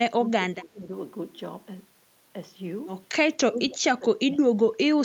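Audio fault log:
0.2–0.92 s, speech suppressed in double talk: The echo canceller likely could not separate the talker here from the far side's echo and pulled the whole signal down. The speech sinks by around 15 dB in patches adding up to about half a second.
3.47–4.84 s, speech suppressed in double talk: The same overlap likely forces a deeper cut. The speech falls by around 25 dB for about a second in total.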